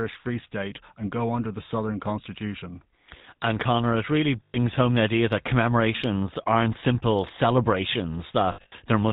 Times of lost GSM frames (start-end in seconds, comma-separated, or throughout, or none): 4.44-4.57, 8.52-8.73